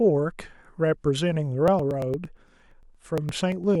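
Speech in which, from 1.68 to 3.75 s, regular ticks every 0.115 s break the sound as about 10 ms is skipped each time: periodic USB or driver dropouts.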